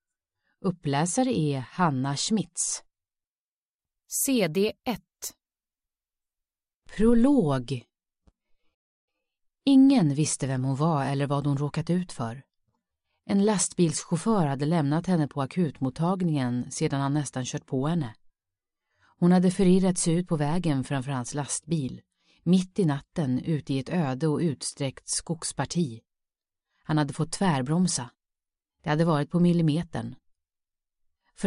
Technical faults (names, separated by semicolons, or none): playback stall